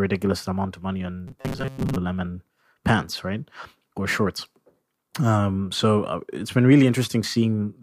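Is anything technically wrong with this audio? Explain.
Yes. From 1.28 to 1.96 s, just after "amount of money", the speech turns into a robotic sound from repeated short buffers. The likely cause is audio arriving too slowly, so about half the time a fragment of roughly 7.5 ms is replayed while fresh material is skipped. That loop imposes a fixed 134 Hz metallic buzz. On a spectrogram, evenly spaced horizontal harmonics at multiples of 134 Hz appear, and the waveform shows identical short cycles repeating.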